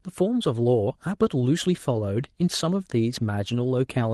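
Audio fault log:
No fault is present in this speech, which has passed over a WebRTC call path whose codec and jitter buffer are working as intended, with the audio band topping out near 12 kHz in a way that fits an Opus stream at around 32 kbps.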